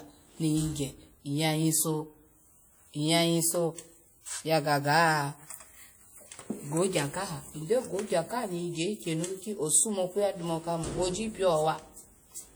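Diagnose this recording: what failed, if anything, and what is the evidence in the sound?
The failure is at the codec stage. The likely cause is WMA compression. Across the whole clip the speech carries plainly audible coding damage. Onsets ring and smear, and a washy hiss rises and falls with the sound. A transform codec with long blocks spreads its quantisation noise over tens of milliseconds around each sound. The damage fits a first-generation WMA encoder at around 48 kbps. Content still reaches about 20.1 kHz, so the band was not cut.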